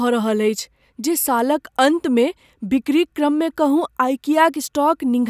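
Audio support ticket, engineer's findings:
No audible faults found in the speech. Nothing to trace to capture, transport or playback components.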